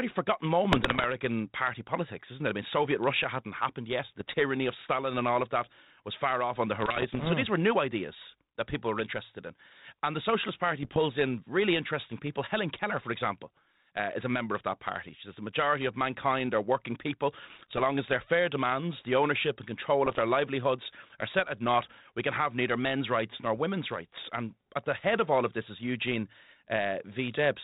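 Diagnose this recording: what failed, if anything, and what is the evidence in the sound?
Bit errors on an ADPCM link, in the transmission stage, at 0.72–1.06, 4.20–4.34, 6.80–7.29, 10.83–10.99, 17.50–17.83 and 20.06–20.20 s: pops and rough bursts with brief level jumps. Flipped bits, roughly one percent, corrupt the 32 kbit/s G.726 decoder's step size and predictor, so each error rings on for milliseconds.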